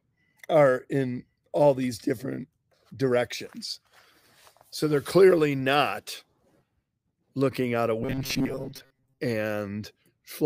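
From 8.03 to 9.20 s the sound turns into a rigid metallic buzz near 134 Hz. This is robotic sound from repeated short buffers. Fresh audio likely arrived too seldom, so a fragment of about 7.5 ms was looped, replacing most of the real signal.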